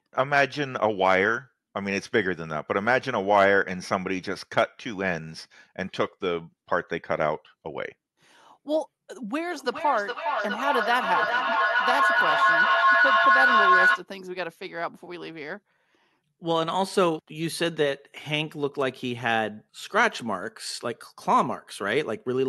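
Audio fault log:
9.49–14.09 s, feedback echo between two devices: a second device replays this audio into the microphone, so each sound returns roughly every 0.4 s, building to about 4 dB above the speech.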